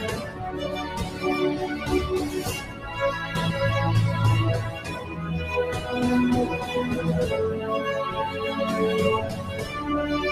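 A speech-tuned noise suppressor applied to music or sounds runs the whole way through, swinging the level by roughly 10 dB, so held parts pump and thin out. The sound is cut by the noise suppressor at 0.22–0.42 s, 1.05–1.23 s, 2.61–2.85 s, 4.72–5.18 s and 9.28–9.73 s. Each dip goes about 6 to 7 dB down as steady or fading sound gets mistaken for noise.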